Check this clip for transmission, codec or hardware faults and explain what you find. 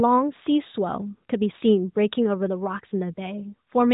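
I found no transmission, codec or hardware faults to explain in this clip.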